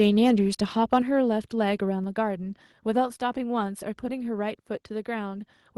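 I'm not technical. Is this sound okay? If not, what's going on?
No. At 0.93 to 0.98 s the loudest part of the speech gets a harsh, crackly edge, most likely microphone overload: the input was set too high, so the tops of the peaks were cut off, unlike a steady buzz. Right after, at 1.02 s, everything suddenly drops to a quieter level, likely the microphone volume stepped down by the call software reacting to that distortion. It is one abrupt step rather than a gradual fade.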